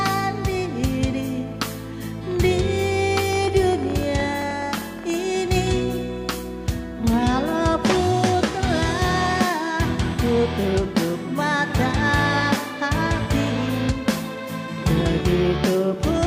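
A train of clicks runs from 3.33 to 5.15 s: around thirty similar pops at about 13.3 per second, irregularly spaced, peaking a few dB above the audio, likely from electrical interference.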